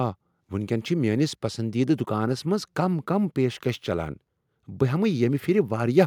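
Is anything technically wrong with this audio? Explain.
No, nothing technically wrong can be heard here.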